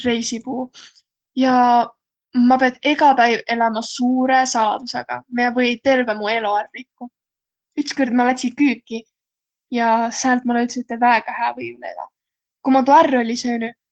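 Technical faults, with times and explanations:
Throughout: Opus voice compression. Coarsely coded excitation makes the speech hoarse and slightly robotic, not just dull like a low-pass, with nothing above 9.1 kHz.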